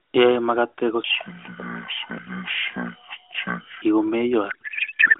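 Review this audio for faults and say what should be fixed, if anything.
A codec payload misread runs from 4.50 s to the end at 5.20 s. The speech becomes garbled warble that barely tracks it, which fits octet-aligned AMR frames being unpacked as bandwidth-efficient. To prevent it, make both ends negotiate the same AMR payload format.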